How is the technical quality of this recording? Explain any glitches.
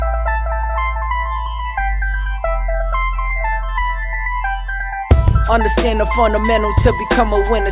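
The music recording shows no technical faults. There are no glitches to explain.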